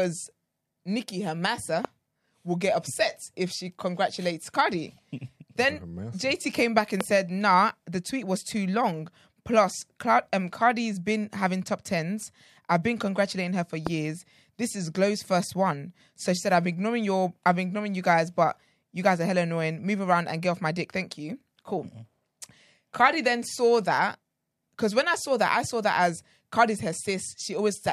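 Speech with three loud pops: at about 1.85 s just before "will get upset if", at 7.01 s after "came back", and at 13.87 s after "been congratulating her for". Each is a single sharp crack of roughly 20 ms, well above the voice, which continues underneath. The likely cause is a brief voltage spike from a plug, switch or static.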